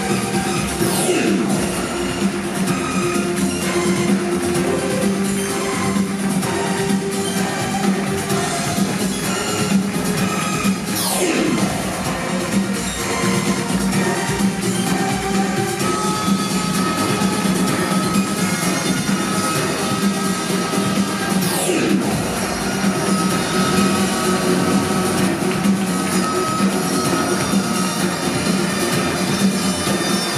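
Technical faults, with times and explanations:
23.60–25.28 s, doubled audio track: for this stretch a second, full-band copy of the sound runs about a fifth of a second behind the original, somewhat quieter (roughly 5 dB down). It has no decay tail or room colouring, so it comes across as a crisp, out-of-step double rather than an echo. It cuts in and out abruptly at both ends. The likely cause is the same signal being captured a second time through a slower path, or an edit briefly holding two misaligned copies.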